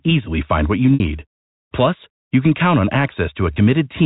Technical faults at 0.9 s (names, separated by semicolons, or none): packet loss with pitch repetition